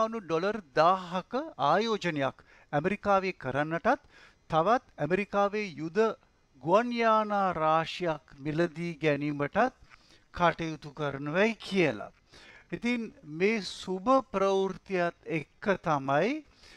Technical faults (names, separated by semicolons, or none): time-stretched section